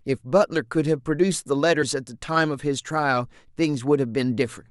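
From 1.81 to 1.83 s, compressed frames are skipped. The speech jumps ahead by roughly 50 ms, which points to about two lost frames of 23.2 ms. They were missing or rejected by the decoder.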